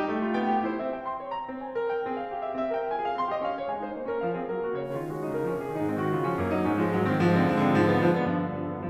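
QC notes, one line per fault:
4.82–8.23 s, digital radio blending to analogue: the receiver drops to FM with a 128 ms cross-fade and back, bringing in hiss roughly 35 dB down and a level shift of about 1 dB.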